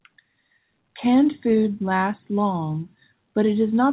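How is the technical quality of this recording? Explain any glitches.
The technical quality holds up, with no glitches to explain; the call path's narrowband coding leaves nothing above 4 kHz.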